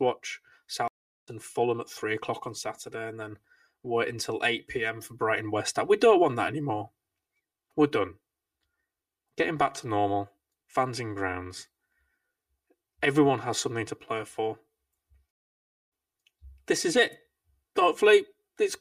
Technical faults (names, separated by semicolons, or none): channel delay (comb filtering); stream reconnect